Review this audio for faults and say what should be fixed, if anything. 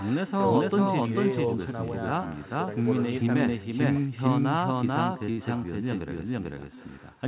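Doubled audio track, throughout: a second full-band copy of the speech sits roughly 400 ms behind at about the same level, dry and without room colour. This is likely a second capture path or a misaligned edit mixing the signal in twice. Prevent it by routing the source through one path only.

Echo with no canceller, throughout: the far end's loudspeaker feeds its microphone, so the speech returns about 18 dB down, roughly 400 ms late, after the network round trip. It is thinner than the doubled copy. Prevent it by enabling acoustic echo cancellation or using headsets.

Short stall from a late packet, at 5.31 to 5.40 s and 6.75 to 6.79 s: the jitter buffer ran dry, so the last sound was stretched by 70 ms and then 20 ms until data arrived. Nothing was lost, but the sound hangs briefly. Prevent it with a steadier network or a deeper adaptive jitter buffer.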